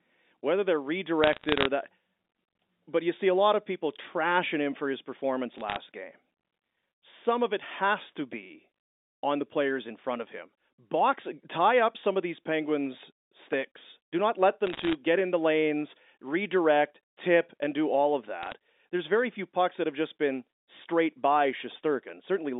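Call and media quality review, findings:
Bit errors on a digital phone line, 1.24–1.66 s after "whether they're", 5.58–5.76 s after "him for his performance", 14.67–14.95 s, 18.43–18.52 s. Crackle of sharp ticks over unchanged speech. Single corrupted G.711 mu-law samples; sign or high-bit flips give the loudest ticks. Error rate a fraction of a percent, densest near 14.7 s. Band-limited line audio, roughly 250 Hz to 3.7 kHz, carries the bursts.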